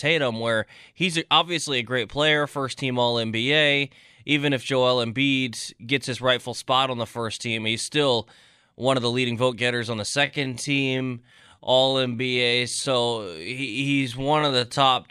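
From 10.2 s to the end at 15.1 s, a time-stretched section slows the speech to 0.65 times its pace at unchanged pitch, likely from software repeating short pieces to lengthen it. It drags; spectrogram harmonics keep their spacing while onsets stretch.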